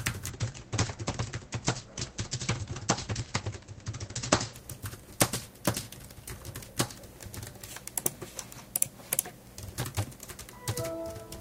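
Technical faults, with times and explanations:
0.31 to 7.85 s, call bitrate drop: the audio turns rough and muffled as the encoder's bit budget collapses, which fits a fall from around 128 kbps to about 14 kbps, at its lowest for roughly four seconds. Starved of bits, the codec quantises coarsely and discards everything above 8 kHz instead of 20 kHz. On a spectrogram the upper band goes abruptly empty above 8 kHz, with smeared, blotchy texture below. The waveform envelope barely changes.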